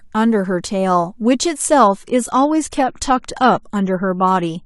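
At 1.87 s the speech drops abruptly to a lower-quality version, and it stays there to the end. This is an adaptive stream at a lower bitrate. The connection slowed, so the player switched to a cheaper encoding without leaving a gap. Codec artefacts rise. The change fits a step from roughly 96 kbit/s AAC down to about 32 kbit/s.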